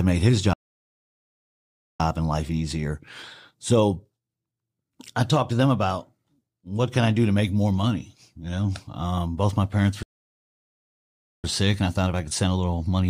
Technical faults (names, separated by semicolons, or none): playback stall; time-compressed catch-up